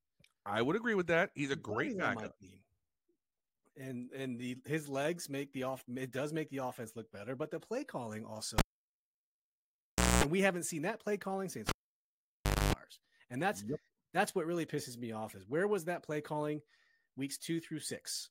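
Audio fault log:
8.58–10.24 s, cable pulled and plugged in: after "but the play calling" a pop cuts the sound to near silence for 1.6 s; a 0.23 s burst of 60 Hz mains buzz follows while only the plug tip touches, then a second pop as the signal returns before "we haven't seen that".
11.69–12.73 s, cable pulled and plugged in: after "seen that play calling" the same pop-gap-buzz-pop pattern recurs, with a 0.99 s dropout and 0.25 s of 50 Hz hum.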